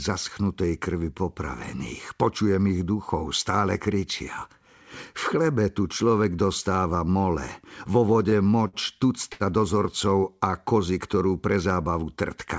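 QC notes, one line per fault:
8.14–8.76 s, repeated stalls (stutter): the jitter buffer ran dry five times in about 0.6 s, and the receiver held the last sound through each gap. About 0.1 s was filled this way, longest gap 54 ms, roughly a sixth of the span, so the speech drags and stutters with little lost.
9.33–9.43 s, short stall from a late packet: one packet arrived about 70 ms late, and the receiver stretched the preceding sound for those 70 ms before resuming where it left off. Nothing is missing, but one sound is held too long with a faint buzz or dip.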